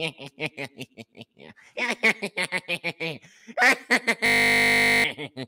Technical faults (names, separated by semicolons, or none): system hang loop